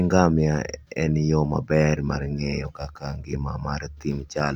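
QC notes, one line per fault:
No technical faults were heard in the speech signal, and its level, continuity and timing hold steady throughout.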